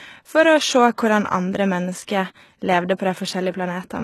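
HE-AAC compression damage runs throughout this speech clip and is plainly audible. Nothing reaches above 12.3 kHz, and the treble sounds synthesised rather than recorded, likely from spectral band replication copying lower bands upward at a rate that fits roughly 16 kbps.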